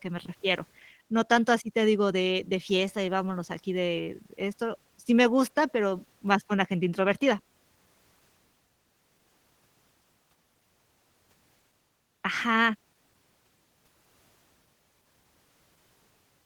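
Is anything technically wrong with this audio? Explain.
Yes. Throughout the speech there is plainly audible Opus voice compression. The speech sounds slightly hoarse and robotic, with a grainy, coarse texture. The top end still extends to about 20.1 kHz. This points to Opus running in hybrid mode at a low bitrate, which fits about 16 kbps with 20 ms frames. In that mode, a linear-prediction coder handles the band below 8 kHz with a coarsely coded excitation, and a transform layer roughly fills in everything above.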